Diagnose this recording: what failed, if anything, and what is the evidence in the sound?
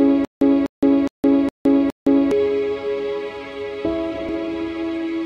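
The playback stage most likely stalled on an empty buffer, replaying its last fragment at each retry. The result is a stutter with silent gaps, already under way when the clip opens and lasting until 2.31 s. A 248 ms burst of sound repeats five times, each followed by about 165 ms of digital silence, giving an even 413 ms cycle. Whatever audio belonged in that stretch never arrives and is lost.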